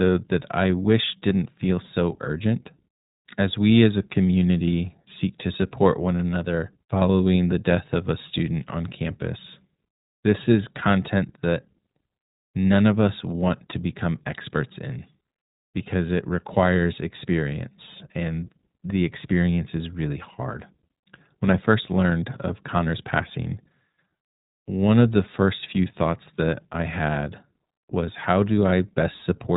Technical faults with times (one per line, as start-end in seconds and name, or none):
0.00-29.57 iLBC codec